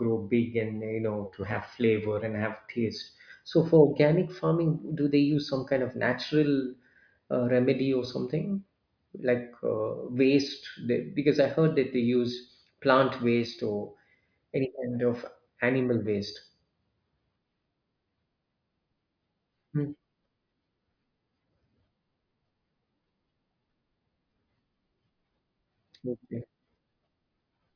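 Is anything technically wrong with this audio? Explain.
No, nothing in this speech recording stood out as a technical problem on listening.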